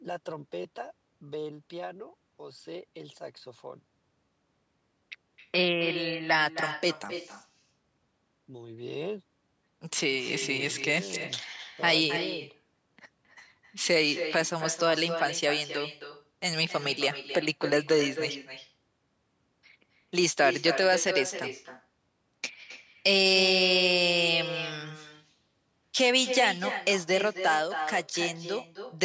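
Throughout the speech, the far end's loudspeaker output reaches its microphone and no echo canceller removes it, so the call carries echo with no canceller. Each phrase returns roughly a third of a second later as a thinner copy about 9 dB quieter, band-limited to 8 kHz like the call audio.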